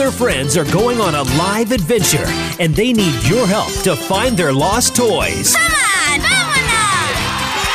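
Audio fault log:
No faults were found anywhere in this clip, with nothing to log.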